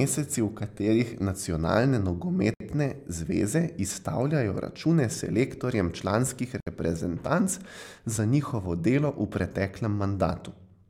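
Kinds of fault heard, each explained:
Gap at a join of encoded pieces: the speech sounds like it was encoded in separate chunks and glued back together untrimmed. Each join leaves a hole of about 64 ms with smeared edges, at 2.54 s and again at 6.60 s right after "izstavljajo račune selektorjem članskih", four seconds apart.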